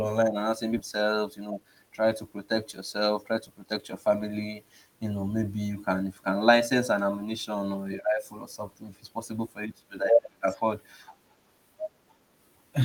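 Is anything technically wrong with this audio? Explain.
Yes, there are two playback faults in this speech clip.

Skip ahead, at 0.77 to 0.79 s, just after "online are now saying". Audio that was already queued behind a stretch of roughly one second was kept, but that second itself was discarded, either lost in transit or thrown out when the jitter buffer overflowed. Nothing is filled into the gap, so playback lurches forward and the two sides of the cut butt together almost seamlessly. Around a second of the talker's speech simply vanishes.

Jitter buffer speed-up, from 1.38 to 1.90 s, leading into "try to protect yourself". The receiver was holding more audio than its target. To shrink that backlog it repeatedly removed short slices of one or a few pitch periods, about 70 ms in total. This plays the passage at roughly 110 % speed with the pitch unchanged, so the phrase sounds rushed rather than higher.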